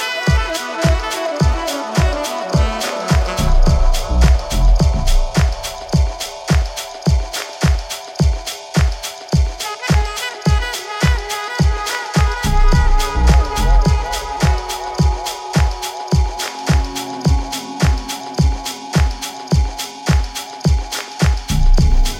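No technical faults can be heard in this recording.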